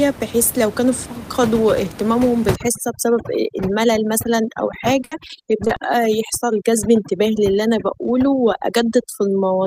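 Overdone noise removal begins at 2.56 s, right after "لو كانو فقدوا اهتمامهم", and lasts to the end of the clip. A noise reduction stage set far too aggressively pulls down or shuts off any frequency band that sits close to its noise estimate. The room noise, about 11 dB below the speech, is crushed into near silence with twinkling specks, and the quieter parts of the speech are stripped away with it.

Repeated packet loss with a robotic sound runs from 5.02 to 5.77 s, inside the noise-removal stretch. Audio went missing again and again, in about nine short holes, the longest 70 ms. Each hole was filled by stretching the sound just before it, so about a quarter of this span, roughly 190 ms, is patched rather than real. The repeated patching sounds choppy, with pieces of the speech dropping out in quick succession.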